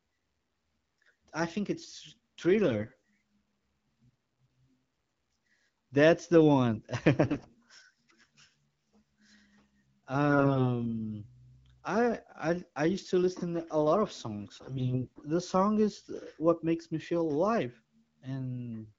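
AMR bit errors flip the weakly protected bits of the speech frames while the core checksum still passes, misplacing excitation pulses and skewing pitch, gain and spectral detail. At 2.64–2.93 s after "I think it's", 7.23–7.58 s after "the one", 10.30–10.67 s, and 14.55–15.20 s between "a lot of" and "the song", the speech keeps its pitch and level but turns hoarse, scratchy and gargly. The 7.2 s burst is the harshest.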